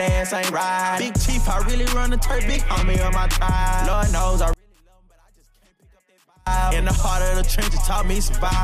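From 4.53 to 6.47 s the sound drops by about 36 dB to a faint residue, likely one channel inverted so shared content cancels in mono.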